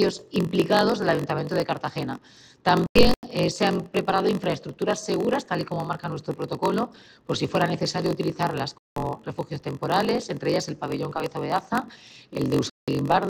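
A block size mismatch (padded) runs through the whole clip. Each block is written short and topped up with zeros before being read, which fits a 1024-sample read block. The inserted gaps produce a steady buzz at 46.9 Hz, and the audio plays at 0.938 times normal speed with its pitch roughly unchanged.

A corrupt frame muted fault strikes at 2.87 to 3.23 s, 8.78 to 9.06 s and 12.70 to 12.88 s. Damaged compressed frames were rejected by the decoder and replaced with silence. Each hole opens abruptly and lasts two to four frame lengths, while overall timing stays intact.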